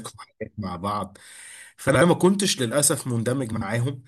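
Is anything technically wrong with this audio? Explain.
Yes. From 1.88 to 2.02 s and again from 3.52 to 3.62 s the speech briefly turns into a garbled flutter. These are frames out of order: two adjacent runs, in blocks of about 64 ms and about 43 ms respectively, were decoded swapped, so each short stretch plays its halves in reverse order without losing any time.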